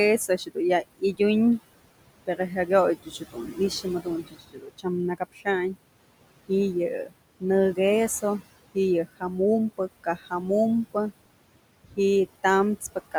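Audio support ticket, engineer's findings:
Noise suppressor artifacts, whole clip. Suppressor pulling about 21 dB from every band it classifies as steady noise, frame by frame. Room noise, sitting about 16 dB under the speech, dips in gaps and swells under syllables.

Speech cut by the noise suppressor. Same gain stage misclassifying quiet speech as noise and attenuating it with the background. Soft consonants and word tails swallowed or faint. Events at 0.28–1.2 s (drop about 19 dB, roughly a fifth of a second total), 2.26–4.86 s (about 20 dB, around a second total, the worst stretch), 5.18–5.47 s (about 19 dB), 7.06–7.43 s (about 15 dB), 9.78–10.32 s (about 12 dB), 11.84–11.98 s (about 17 dB). Each of the last four affects only brief fragments, 100 to 150 ms.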